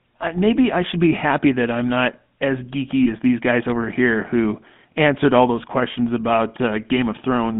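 From start to finish the speech carries the GSM full-rate codec: a buzzy, gravelly roughness, consistent with a 13 kbps full-rate coder that rebuilds the voice from a vocal-tract filter driven by a sparse, regularly spaced pulse train. On a spectrogram the energy sits between about 150 Hz and 3.5 kHz, with nothing above, and the harmonics look smeared and grainy.

Lost GSM frames follow at 3.04–3.08 s, after "that I'm not as" and before "as these guys over", and again at 5.92–5.95 s, after "who answered all those". Each sounds like a single missing frame of about 20 ms, patched by repeating the previous frame's settings. The result is a brief metallic ring, seen as a short, flat, smeared band.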